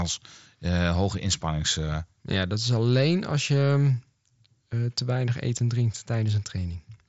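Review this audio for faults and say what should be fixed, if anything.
Nothing in the speech needs fixing. It comes through a Bluetooth mSBC headset codec working as designed, so nothing is heard above 7.7 kHz and there is only a light coding grain.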